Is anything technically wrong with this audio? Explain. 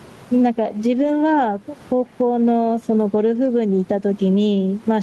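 Yes. The speech has gain pumping throughout, and there are two spots where lost packets were rebuilt from error correction.

Gain pumping runs the whole clip. The level swings by around 15 dB, and the speech sounds squashed. The likely cause is input gain set far too high, with a fast limiter or compressor clamping every loud moment.

A lost packet rebuilt from error correction is audible at 0.95 to 1.05 s and again at 3.45 to 3.47 s. There is no dropout. The decoder filled each spot from a low-bitrate copy carried in the following packet. In the first stretch about 60 ms is rebuilt, which points to three separate 20 ms packets, and it sounds rougher and noisier. The second is a single 20 ms frame with a briefer grainy patch. The room noise sits about 35 dB below the speech.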